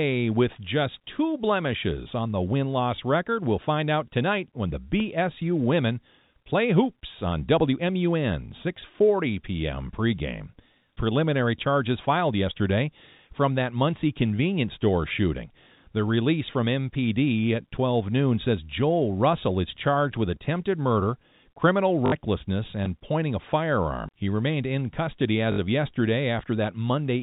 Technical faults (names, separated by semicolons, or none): packet loss with last packet repeated